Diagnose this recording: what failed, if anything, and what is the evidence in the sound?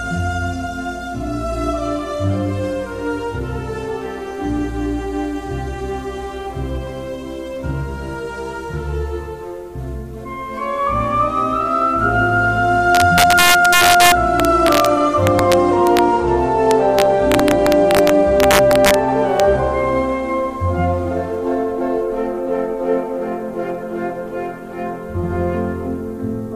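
A fixed-point gain stage let peaks pass full scale and wrap to the opposite sign instead of limiting: integer overflow. Violent cracks, sharper than clipping, hit loud passages from 12.95 to 14.86 s, 15.27 to 15.99 s and 16.71 to 18.94 s, about 2 to 3 dB over, plus one at 19.40 s.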